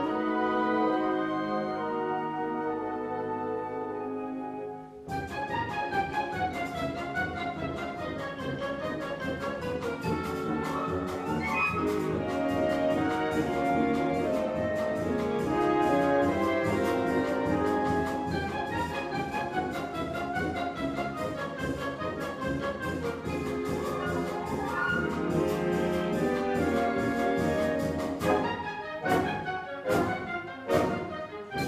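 At 29.57 s a brief burst of DAB burbling breaks through. It is a short blip of noise over the programme. Weak reception has let bit errors slip past the error correction into the MP2 audio data. Corrupted samples put short blips of noise in single sub-bands, and corrupted scale factors make sub-bands leap in level for up to a frame. The damage spans what sounds like a handful of frames, pointing to an error rate of around a tenth of a percent.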